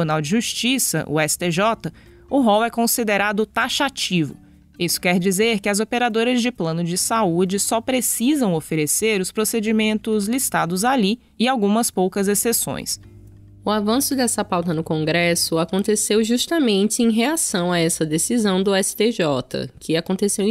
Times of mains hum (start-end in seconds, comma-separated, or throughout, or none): 12.97-15.47